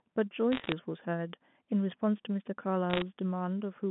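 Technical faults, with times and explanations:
0.52 to 0.72 s and 2.9 to 3.02 s, bit errors on a digital phone line: two short bursts of sharp ticks and crackle sit over otherwise unchanged speech. On this G.711 mu-law line, which carries only about 150 Hz to 3.5 kHz, each flipped bit corrupts a single 8-bit sample. A hit on the sign or a high-order bit throws that sample far off, giving a click. The error rate is around one bit in a hundred during each burst, so the clicks cluster into a brief crackle.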